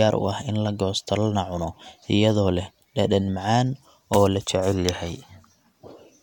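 Speech recording with no audible technical faults.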